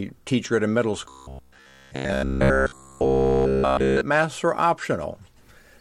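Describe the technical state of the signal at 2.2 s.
A rigid, metallic 67 Hz buzz covers 1.09 to 4.01 s: robotic sound from repeated short buffers, likely a 15 ms chunk looped while audio is skipped.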